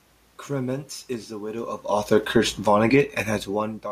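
Right after "is the widow of", from 1.89 s to 2.96 s, the speech and the room noise behind it sink together by about 4 dB. This is automatic gain falling: the gain control judged the input too loud or its background noise too strong and gradually eased its gain down.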